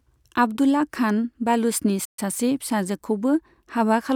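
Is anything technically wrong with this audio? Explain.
Yes. There is a playback stall from about 2.05 to 2.19 s. The player was likely starved of data or had its output thread blocked, so nothing reached the output for roughly 130 ms until it recovered. You hear the speech stop abruptly in mid-flow, then a short dead silence that is too long to pass as a natural pause, and then the speech picks up again as playback resumes.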